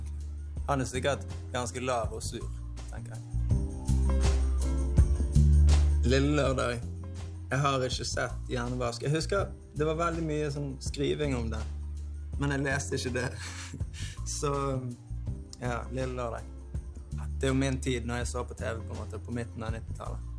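No technical faults can be heard anywhere in this recording.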